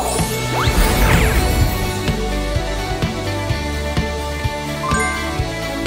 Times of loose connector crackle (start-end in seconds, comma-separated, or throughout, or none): none